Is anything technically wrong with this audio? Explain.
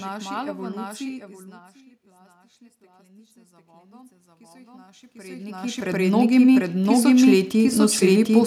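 Yes, there are two faults.

A doubled audio track runs through the whole clip. A second full-band copy of the speech sits a fixed delay of roughly 0.7 s behind the original, at about the same level. It has no decay or room colour, so it sounds like a clean overlapping replay rather than an echo. The cause is likely a second capture of the same signal through a slower path, mixed back in out of step.

Automatic gain rising affects the stretch from 1.46 s to 8.41 s. The input level falls by about 24 dB, and the gain control responds by raising its gain gradually, by about 18 dB in total. The room noise swells along with the speech, which shows the change is in the gain and not at the source. The talker moving, at around 1 s and again near 5 s, is ordinary level variation at the microphone and not a system fault.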